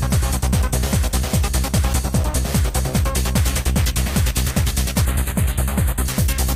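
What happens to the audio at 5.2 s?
At 5.2 s the audio is inside a stretch of channel delay (comb filtering) running from 5.05 to 6.05 s. One channel lags the other by roughly a tenth of a millisecond, which fits a delay of a few samples, and summing them to mono cancels shared content at evenly spaced frequencies, the first near 5 kHz. The result is a hollow, phasey colour. Unlike a flanger's sweep, these notches stay fixed throughout.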